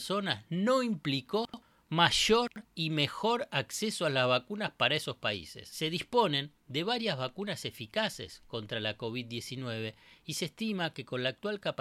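Brief jumbled stutters break the speech at 1.45 to 1.62 s and again at 2.48 to 2.65 s. Both are chunks out of order: an 85 ms block arrived one chunk late and played after its successor, swapping two blocks with three hard joins.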